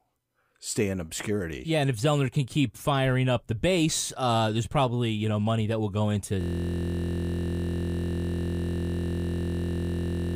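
At 6.41 s, just after "that will go into", the speech gives way to a system hang loop that continues to the end of the clip. The host or driver stopped supplying new data while the audio hardware kept replaying the same stretch of its ring buffer. The repeated segment is 23.22 ms long, which fits a 1024-sample buffer, so it cycles at 43.1 Hz and is heard as a steady, low buzz instead of a stutter.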